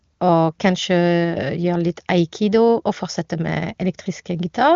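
No technical faults can be heard in this speech, which comes over an AMR wideband (HD Voice) link with nothing above about 7.3 kHz.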